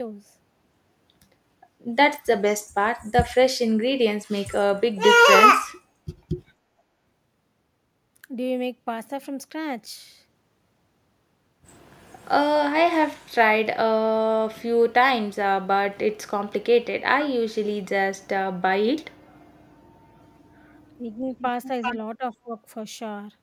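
At 20.97 to 21.04 s and again at 22.17 to 22.55 s, the speech level dips sharply, by about 10 dB and then about 15 dB. This is speech suppressed in double talk, likely an echo canceller ducking the talker while the far side spoke, and unlike a packet dropout it attenuates rather than cuts to silence.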